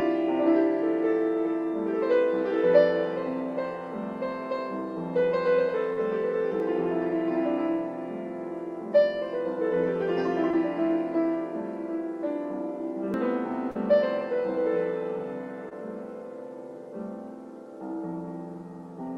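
At 5.93 s there's a short concealed packet loss: about 40 ms of the stream never arrived in time, and the decoder covered roughly 35 ms of it by stretching the last sound forward before blending back in. It comes across as a quick smear or wobble. At 6.6 s there's a small jump ahead in the sound, around 20 ms gone, most likely a dropped buffer (overrun) where samples were overwritten before being read and the two edges got spliced straight together. The same packet-loss smear shows up again at 10.51 s, this time about 20 ms missing. At 13.14 s comes a bigger skip, roughly 70 ms, heard as a jump with no gap of silence. That's likely the same buffer-overrun signature, just a longer loss. Then two more concealed losses follow: at 13.71 s about 40 ms was patched over, and at 15.69 s about 20 ms, each a brief blur before the real signal resumes. Underneath all this you can hear the call codec's character. 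The top end stops at 12 kHz, with the coding grain you'd expect from Opus at around 32 kbps.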